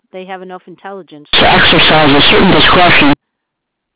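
Companded audio read as linear runs from 1.33 s to 3.13 s of this speech. The A-law bytes from the telephone path are being played as plain linear 8-bit samples, with no expansion back from the logarithmic scale. Every change of sign throws the output across about half its range, so soft and loud passages land at similar levels and the waveform is badly bent. It sounds like harsh, very loud buzzing distortion, with heavy noise filling the pauses. Outside that span, the A-law coding is heard as normal 4 kHz-limited telephone sound.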